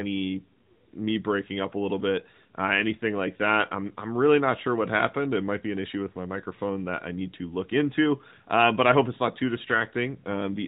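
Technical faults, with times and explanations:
Nothing in this speech stood out as a technical problem on listening.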